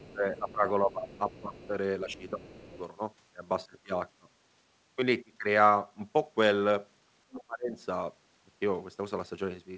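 A speech recording over a call link where the echo canceller, likely overwhelmed by the far end playing through a loudspeaker, lets some of it back into the microphone, so the other side's voice is leaking through as a faint second voice, roughly 25 dB below the talker, from 0.00 to 0.15 s, 1.12 to 1.67 s and 2.11 to 2.79 s. Those overlapping stretches are also where the canceller, likely unable to tell its own talker from the returning echo, turned everything down, giving speech suppressed in double talk. The main voice dips by roughly 15 dB in patches between 0.11 and 1.73 s, for about a second in total, and again from 2.04 to 2.75 s. A deeper dip of roughly 30 dB, lasting about half a second, hits between 7.26 and 7.77 s. Throughout, nothing reaches above 8 kHz, which fits a wideband call codec such as G.722.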